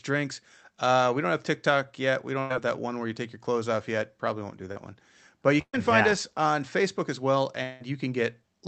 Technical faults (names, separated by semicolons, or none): burst of packet loss; short concealed packet loss; long network dropout